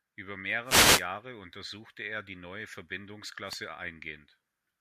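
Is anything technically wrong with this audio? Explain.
Yes. Wireless microphone noise hits at 0.64 to 1.06 s and 3.45 to 3.60 s: the FM radio signal fades through cancelling reflections, letting receiver noise swell into a brief swish of static over the speech.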